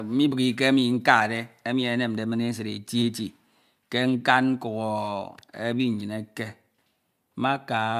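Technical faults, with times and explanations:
No technical faults can be heard anywhere in the recording.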